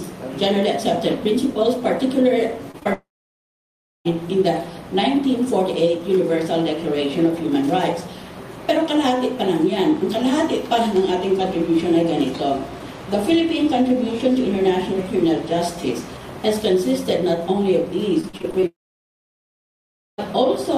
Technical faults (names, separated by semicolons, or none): short concealed packet loss; long network dropout; repeated packet loss (robotic sound)